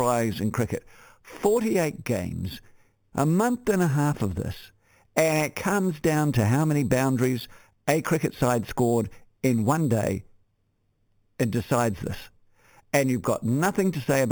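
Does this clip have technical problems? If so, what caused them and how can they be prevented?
Yes: imaging from sample-and-hold upsampling runs throughout. The 8 kHz speech was repeated sample by sample to 44.1 kHz, leaving mirrored fizz at 4 to 8 kHz, about 18 dB down, moving opposite the pitch. Interpolating with a proper low-pass filter prevents it.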